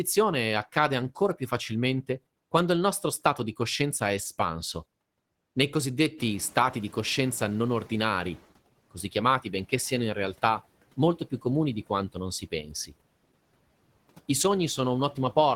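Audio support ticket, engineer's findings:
Noise suppressor catching up, 6.17–8.47 s. Room noise steps up by about 13 dB around 6 s; background passes with less reduction at first, then sinks over 2.3 s. Suppressor noise estimate lagging the sudden rise, adapting slowly before applying its full cut of about 11 dB. Afterwards, background sits about 22 dB under speech.

Speech cut by the noise suppressor, 12.41–12.93 s. Roughly 0.2 s of speech pulled down, deepest by about 14 dB; soft segments sound swallowed and faint. Suppressor misclassifying low-level speech energy as noise and attenuating it along with the background.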